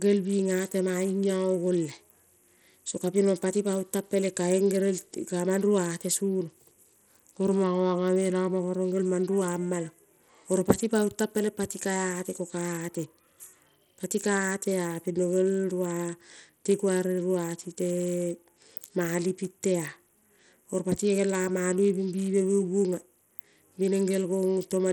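Throughout the speech, plainly audible damage from Bluetooth SBC compression is likely, with a small bit pool consistent with roughly 80 kbps. Upper sub-bands starve of bits, so treble flickers away and gritty quantisation noise rides along; a spectrogram shows ragged, blotchy high bands.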